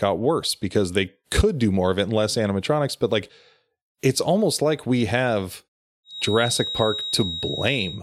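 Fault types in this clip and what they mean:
Feedback whistle: From 6.03 s, just after "almost like we have", a thin steady tone near 3.8 kHz sits roughly 10 dB below the speech until the end. It swells and fades slowly in level. This is likely a speaker-to-microphone loop held just short of runaway feedback.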